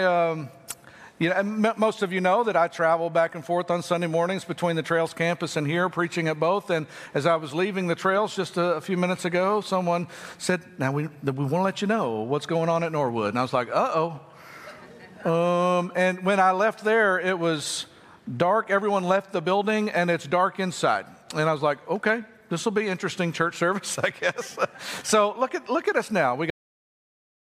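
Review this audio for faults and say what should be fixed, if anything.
A cut-off end at 26.50 s: the sound stops mid-event and drops straight to digital silence for the final second, because the last buffers were never written out. Unlike a fade-out or natural ending, there is no decay or tail at all. To prevent it, flush and close the writer only after every pending buffer has been delivered.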